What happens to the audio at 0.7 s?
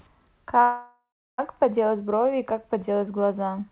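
A call audio freeze runs from 0.62 s to 1.40 s, covering 0.7 s. The packets were likely held up in transit, so the jitter buffer emptied and the receiver stretched the last sound into a fading buzz that ends in about 0.34 s of silence. When the speech resumes it picks up where it stopped, with nothing lost. The 0.76 s gap pushes everything after it later by that amount, all within the 4 kHz band of the call codec.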